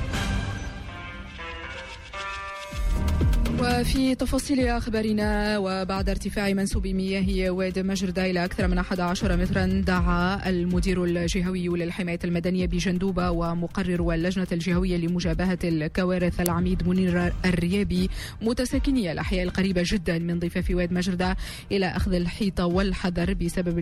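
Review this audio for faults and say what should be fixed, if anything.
At 16.46 s there is an uninitialised buffer: a block of about 1.45 ms, which fits a 64-sample buffer, was played before any audio was written to it, so stale memory came out as a loud crack. On a waveform it appears as a sharp spike; on a spectrogram, a thin vertical broadband stripe. Prevent it by zero-filling every buffer on allocation and outputting silence whenever a block isn't ready in time.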